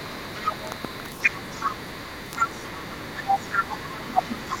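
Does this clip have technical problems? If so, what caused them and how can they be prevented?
Yes. For the whole clip the speech is coarse and gritty, with a harsh grain that follows every syllable and quiet parts that sputter or collapse to silence. The error sits only about 10 dB below the speech. This is low bit depth without dither: the audio was likely rounded to about 4 bits with no dither, so the quantisation error tracks the signal instead of becoming steady hiss. Keeping 16 bits or more through the chain, and dithering whenever the word length is reduced, prevents it.

From 0.03 s to 4.19 s a second, faint voice runs under the main talker, roughly 25 dB below it. This is the other side's voice leaking through. The far end's voice, playing from the talker's loudspeaker, reached the microphone, and the echo canceller likely failed to remove all of it before sending. Using a headset, or an echo canceller that adapts properly to the room and device, prevents it.

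From 4.03 s to 4.57 s, just as the leaking voice overlaps the talker, the main speech drops sharply, falling by as much as roughly 35 dB over about half a second. This is speech suppressed in double talk. With both sides sounding at once, the echo suppressor likely could not separate the local talker from the loudspeaker echo and turned the signal down. Better double-talk detection, or a headset that removes the echo path, prevents it.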